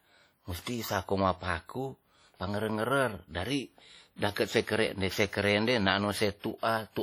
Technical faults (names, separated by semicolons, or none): WMA compression